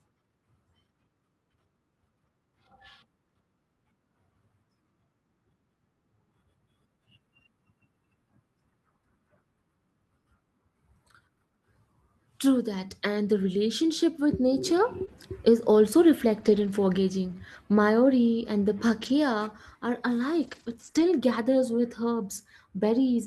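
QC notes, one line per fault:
15.05 s and 20.91 s, short concealed packet loss: At each point, about 20 ms of audio never reached the decoder in time, so the receiver invented a fill by carrying the preceding sound forward, pitched if voiced and as shaped noise if not, then crossfaded back into real audio. Each gap is brief enough to pass as a quick smear or wobble.
15.07 s to 21.01 s, lost packet rebuilt from error correction, at 15.07 s, 16.39 to 16.69 s, 17.27 to 17.33 s, 19.01 to 19.07 s, 20.43 to 20.89 s and 20.95 to 21.01 s: Packets went missing, but each following packet carried a low-bitrate backup copy that the Opus decoder played in their place, so nothing drops out. The rebuilt stretches run from 20 ms to 240 ms, and the longest, at 16.39 s and 20.43 s, have a coarser, noisier texture, the typical sound of those reduced copies. The short span at 15.07 s falls within the concealed gap at 15.05 s, and the one at 20.95 s directly follows the gap at 20.91 s, so those two moments combine both kinds of repair.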